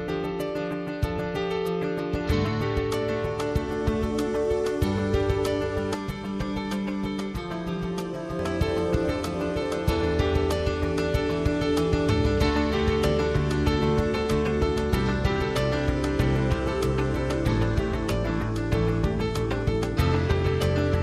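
From 5.94 to 8.39 s the sound turns hollow and phasey, as if heard through a tube, with fixed notches in the spectrum. This is channel delay (comb filtering): one channel runs late by around 5 ms, so summing to mono cancels evenly spaced frequencies starting near 100 Hz.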